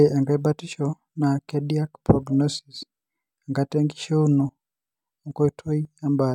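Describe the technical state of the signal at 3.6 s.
At 3.6 s the signal is intact, with no audible fault at that moment.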